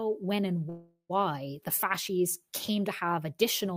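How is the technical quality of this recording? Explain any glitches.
The recording has one glitch, a call audio freeze from 0.69 to 1.21 s, right after "when and". Packets were likely held up in transit, leaving the jitter buffer empty, so the receiver stretched the last sound into a fading buzz for about 0.4 s, then dropped to roughly 70 ms of silence. When delivery resumed, the speech picked up at "the fasces came to" with nothing lost; the pause was simply inserted, pushing everything after it later by about 0.4 s.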